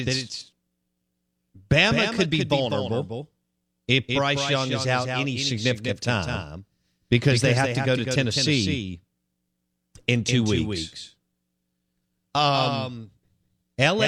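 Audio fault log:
Throughout, doubled audio track: every sound in this speech is followed by a second full-band copy trailing about a fifth of a second behind and roughly 5 dB quieter, so each syllable gets a flat, distinct slap rather than a roomy tail. There's no decay or colouring on that copy, which is why it reads as a clean duplicate and not reverb. Most likely the same signal is reaching the mix twice, once through a slower path.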